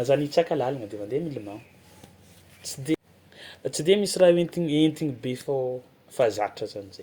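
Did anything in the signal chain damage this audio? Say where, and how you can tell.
No, no faults are audible.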